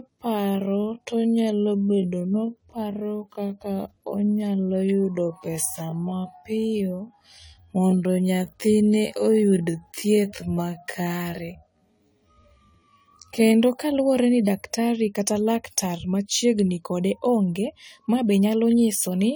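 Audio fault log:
throughout generation loss: The sound is swirly and hollow, with a watery smear in the high end and soft, blunted attacks, rougher than a single AAC-LC encode at around 64 kbit/s would normally sound. This points to the audio likely having been decoded and re-encoded with that lossy codec a few times over. Each new pass quantises on a shifted frame grid, so its noise and missing spectral bands pile on top of those left by the earlier passes.
0.00 to 13.54 s time-stretched section: Everything up to "kaluwore ni daktari kata" drags at roughly 0.56 times normal pace while the pitch stays unchanged. Syllables are drawn out, and the pace snaps back abruptly once that phrase arrives. The likely cause is stretching software lengthening this stretch to fill a slot, holding the pitch by repeating short overlapping pieces of the sound.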